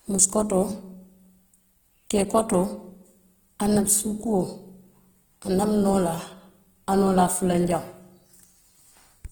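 From start to finish the speech carries Opus compression artefacts, plainly audible and most likely from encoding in Opus's music (CELT) mode at a low rate, around 16 kbps. Bands short of bits are refilled with folded or noise-like content, so voiced sounds turn grainy and rough rather than hollow. That sets it apart from MP3 damage: there is little swirling or watery warble, and the bandwidth stays full, reaching about 20.1 kHz instead of sounding muffled.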